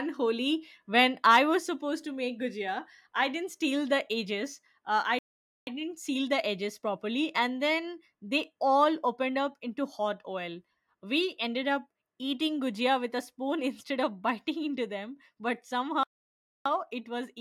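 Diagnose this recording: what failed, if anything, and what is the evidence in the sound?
Playback stall, likely from data starvation at playback: speech cuts to silence at 5.19 s (0.48 s) and 16.03 s (0.62 s), after "biting into them but".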